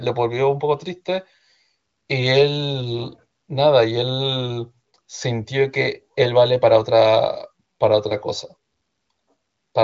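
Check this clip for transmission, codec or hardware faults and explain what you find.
No faults found.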